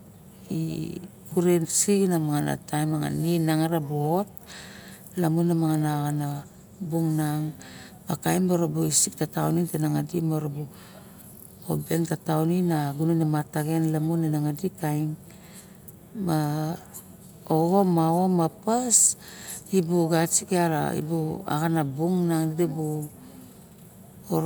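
No technical faults are audible.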